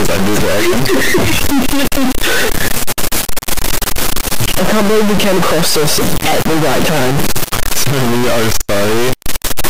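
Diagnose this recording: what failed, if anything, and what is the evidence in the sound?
A stuck bit runs through the whole recording, most likely at the converter or the digital line leaving it. The sound carries a harsh, buzzy distortion from start to finish, and quiet passages fill with loud noise instead of falling silent. The offset is large, around -5 dBFS, so the stuck line sits high in the word. On a waveform, about half the samples jump by a fixed step, giving a squared, terraced look. A spectrogram shows dense broadband hash even in gaps.

An electrical switching spike appears at 0.85 s as a sharp snap or tight cluster of clicks laid over the sound. The likely cause is a nearby switch, relay or static discharge arcing briefly and coupling into the analogue wiring before conversion. On the waveform it is a narrow, steep-edged burst. A spectrogram shows a thin vertical stripe reaching across the full frequency range for just that instant.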